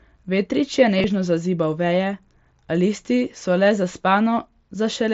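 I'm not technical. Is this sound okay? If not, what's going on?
No. Around 0.98 to 1.04 s there is concealed Bluetooth headset packet loss. Brief scraps of sound, about 30 ms in total, went missing and were filled by repeating the moment just before. So instead of a silent gap, you hear a tiny buzzy smear.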